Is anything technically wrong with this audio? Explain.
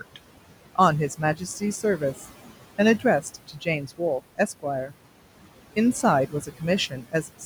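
Yes, there are two related faults, both from noise suppression applied to this speech.

Noise suppressor artifacts run through the whole clip. The suppressor decides, frame by frame, which frequency bands hold steady noise and pulls them down, here by about 18 dB. The room noise, sitting about 15 dB below the speech, drops away in the pauses and creeps back under each phrase.

Speech cut by the noise suppressor happens at 3.21 to 3.67 s, 6.27 to 6.62 s and 6.9 to 7.14 s. In each stretch the suppressor mistook quiet parts of the speech for noise and turned them down along with the background, by about 12 dB, 15 dB and 11 dB. The affected portions add up to roughly a fifth of a second in the first two spans and a bit less in the last. Soft sounds there come across swallowed and faint.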